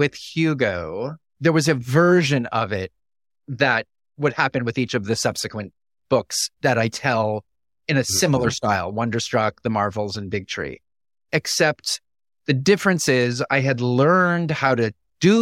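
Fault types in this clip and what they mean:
Nothing wrong turns up anywhere in this recording, so there's no fault type to list here.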